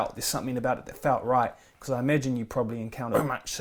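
At 3.11 s, near the end of the speech, a burst of damaged data in the compressed stream breaks through. It lasts until 3.15 s, about 40 ms. Some of the coded bytes there are wrong. The decoder cannot read those frames properly and loses its place. It then has to hunt for the next valid frame header before it can resume. The result is a short glitch that cuts across the speech.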